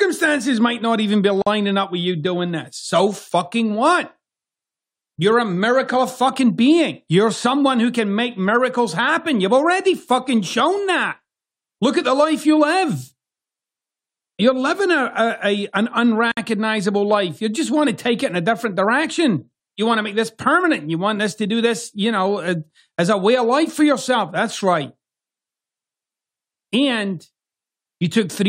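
At 1.42 s, right after "might not even be", the speech drops into a hole of about 46 ms before picking up with "up with you doing". It happens again at 16.32 s, after "a an", with a 56 ms gap. Both are a gap at a join of encoded pieces: separately encoded chunks were butted together untrimmed, so encoder start delay and end padding sit there as silence, with smeared edges, and the speech resumes right where it left off.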